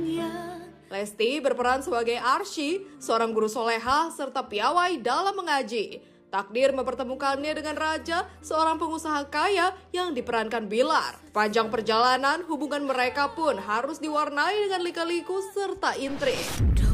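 No faults can be heard anywhere in this recording. Nothing in it breaks, stalls or changes character from one moment to the next.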